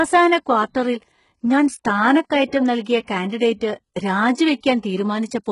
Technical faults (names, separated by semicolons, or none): HE-AAC compression